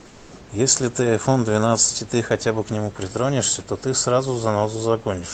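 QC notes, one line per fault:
0.00–0.31 s, comfort noise in place of the background: room tone becomes a steady, featureless hiss about 2 dB quieter, likely synthetic noise filling a discontinuous-transmission pause.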